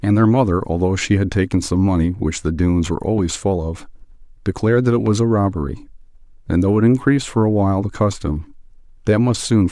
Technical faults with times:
3.18-3.21 loud pop
5.06-5.09 loud pop

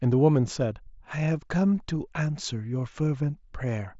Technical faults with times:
none

